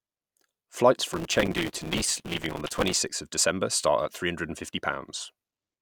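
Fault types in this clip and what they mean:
Processor overload crackle: the machine couldn't keep up with its tiny audio buffers, so from 1.13 to 2.98 s the speech gets a gritty, tearing crackle. Hundreds of deadlines slip in a row, each repeating a sliver of old audio, which fits buffers of around 3 ms.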